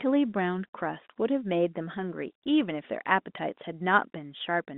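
No technical faults are audible.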